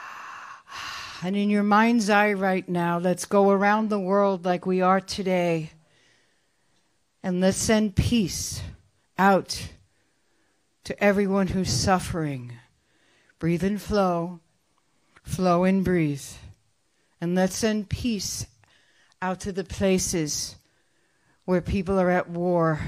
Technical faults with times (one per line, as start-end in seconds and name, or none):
none